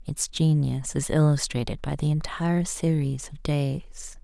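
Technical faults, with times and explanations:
No technical faults can be heard in the speech signal at any point.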